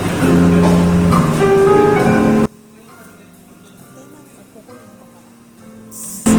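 Opus compression runs through the whole clip and is plainly audible. The sound has the grainy, rough texture of Opus working in its music (CELT) mode at a very low rate, which fits about 16 kbps. With so few bits, the encoder still preserves each band's overall energy but rebuilds fine detail by folding lower bands upward or filling them with noise. Tones therefore turn hissy and coarse rather than swirly, while content still reaches up to about 20.2 kHz, so the band stays full.

One channel inverted takes over from 2.46 s to 6.26 s. The level collapses by about 26 dB and leaves only a faint residue. The likely cause is one stereo channel flipped in polarity before being summed to mono. Everything the two channels share cancels, and what survives is just the small difference between them. That is why the sound drops suddenly to a faint trace for nearly four seconds instead of fading.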